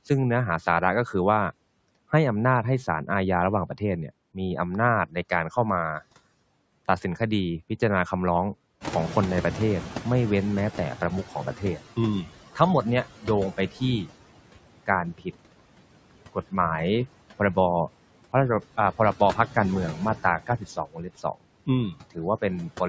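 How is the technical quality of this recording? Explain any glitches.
The recording's technical quality is compromised by the noise suppressor, which is working throughout and repeatedly misjudges the signal.

Noise suppressor artifacts run the whole clip. The suppressor pulls down bands it reads as steady noise by about 18 dB, frame by frame, so the background dips between phrases and swells back under the speech.

The noise suppressor is catching up from 8.8 to 11.8 s. Room noise jumps by about 15 dB around 9 s, and the suppressor's noise estimate needs about 3 s to follow. The louder noise first comes through only about 13 dB reduced, then settles lower as the estimate adapts.

Speech is cut by the noise suppressor at 5.06–5.51 s, 11.57–14.1 s, 14.86–15.27 s and 19.94–22.18 s. The suppressor mistakes parts of the speech for noise and drops them by about 16 to 19 dB. The affected parts of the speech sound swallowed or faint. 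The cuts are brief in the first and third spans, total roughly half a second in the second, and reach about 0.7 s in the last.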